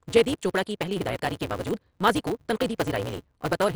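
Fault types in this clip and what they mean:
MP2 compression: The speech sounds dull and gurgling, with granular distortion and upper bands switched off, likely from MPEG Layer II coding at a low rate near 56 kbps. A spectrogram shows a hard top edge and upper bands flickering in blocky patches.
Block size mismatch (truncated): The end of every block is discarded, so the speech runs 1.88 times fast at roughly normal pitch, with a 188 Hz buzz that fits 256-sample reads. The waveform shows regular splice jumps, and the spectrogram shows a harmonic comb.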